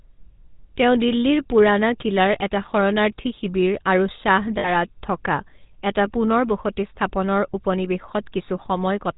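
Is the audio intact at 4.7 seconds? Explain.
No. From 4.58 to 4.70 s, lost GSM frames leave about 60 ms patched by repeating the last good frame. This is heard as a rough, metallic ring. On a spectrogram it appears as frozen, smeared bands. The GSM full-rate codec also colours this moment, adding plainly audible buzzy, gravelly roughness, and the spectrogram is empty above 4 kHz.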